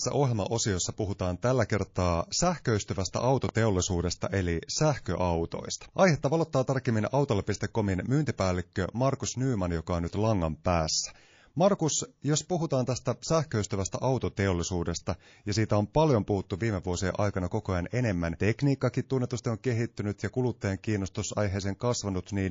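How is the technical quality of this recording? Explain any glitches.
Quality's fairly rough, with plainly audible codec damage throughout and two brief smeared attacks.

MP3 compression: the whole clip has that watery, swirly sound, likely from a low-bitrate MP3, something like 32 kbps.

Pre-echo: at 5.03–5.06 s and 16.58–16.61 s, a short hiss about 11 to 12 dB up creeps in roughly 25 to 31 ms before an attack, as block-wide quantisation noise leaks ahead.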